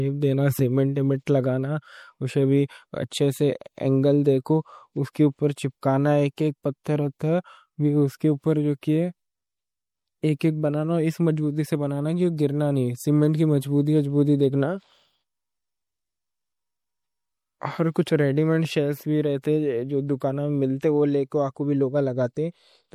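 Throughout the recording, MP3 compression is likely starving the encoder of bits, at a rate that points to about 64 kbps, so weak frequency lines flicker on and off between frames. The speech sounds plainly watery and swirly, s sounds chirp metallically, and nothing survives above 20.3 kHz.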